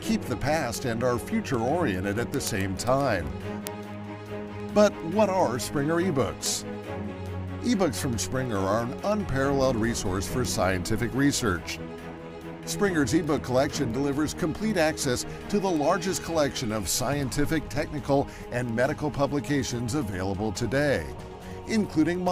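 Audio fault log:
0.21 to 22.28 s, word clock ticks: sharp clicks of uneven strength repeat roughly every 0.15 s, around 150 of them. A single sample gets dropped or repeated each time two unlocked clocks slip past each other, and the rate points to something like a 150 ppm clock mismatch.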